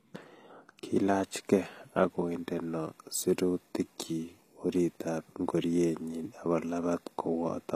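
The encoding likely went through HE-AAC compression, which codes only the lower spectrum and synthesises the treble by copying lower bands upward under a coarse envelope. Throughout the speech, the damage is plainly audible: the top end is not genuine, with s sounds turning gritty and lispy where the copied harmonics fail to line up. Nothing is present above about 14.9 kHz, and the degree of artefacting fits a bitrate near 24 kbps.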